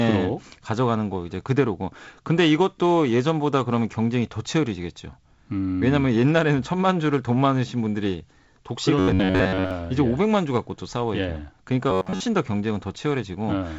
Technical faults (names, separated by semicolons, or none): robotic sound from repeated short buffers